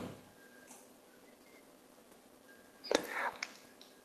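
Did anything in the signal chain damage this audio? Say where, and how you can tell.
Yes. Network and jitter buffer: a skip ahead at 0.67 s drops roughly 0.7 s, and the waveform shows two segments butted together with no gap.

Jitter buffer speed-up from 0.77 to 2.64 s plays the speech at 118% with the pitch unchanged. Spectrogram harmonics stay level while syllables compress, as about 0.3 s of pitch periods is trimmed away.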